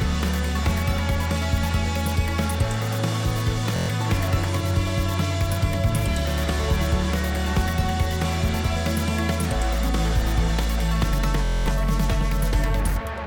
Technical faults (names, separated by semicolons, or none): Bluetooth stutter